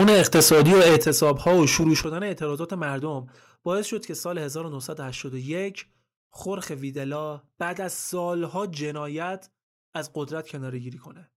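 From the start to 2.03 s the input gain was likely set too high, so the speech drove the converter about 13 dB past full scale and the waveform tops were sheared off flat. That is microphone overload. Around a fifth of the samples sit pinned at the limit, and every louder syllable comes through with a harsh, crackling, buzzy edge rather than a clean peak.

Software gain control then likely reacted to that clipping by turning the device's input down in discrete jumps. This microphone volume stepped down at 1.02 s and again at 2.04 s by about 9 dB each, and the voice and background both drop abruptly at those instants. The second cut coincides with the clipping ending. A smaller step of about 2 dB at 4.08 s gives a slighter dip in level.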